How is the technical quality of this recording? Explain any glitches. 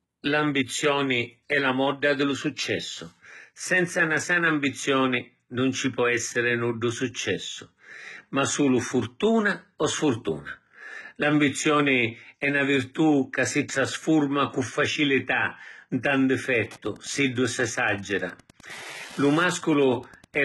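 The recording is heavily compressed throughout and picks up radio interference near the end.

Throughout, the speech sounds gritty and lispy on s sounds, likely from HE-AAC compression near 16 kbps. Spectral band replication copies lower bands upward, and a spectrogram shows a copied-looking treble ending at 11.8 kHz.

From 16.31 s to the end, Wi-Fi interference adds a steady ticking about ten times a second, well below the speech. The nearby radio's beacon, every 102.4 ms, is rectified by the circuit and shows as evenly spaced vertical lines on a spectrogram and small regular spikes on the waveform.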